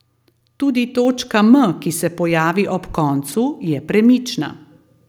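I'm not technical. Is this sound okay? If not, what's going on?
No. At 1.05 s a microphone volume stepped up: voice and background get louder together in one instant, unlike a speaker simply talking louder. Around 3.28 to 3.34 s, chunks out of order: a 20-millisecond piece plays two pieces late, so nothing drops out but that moment sounds jumbled.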